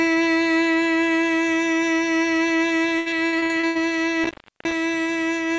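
From 2.98 to 3.77 s the music turns choppy and robotic, with seven short holes. This is repeated packet loss: lost packets were patched by stretching the preceding sound, covering nearly half the stretch, with the longest gap 83 ms. From 4.23 to 4.73 s the sound drops out with crackle at both edges, leaving faint hiss for about 342 ms. This is an intermittent contact, a loose cable or plug briefly opening. Both faults sit within a call path whose band stops at 8 kHz, which fits G.722.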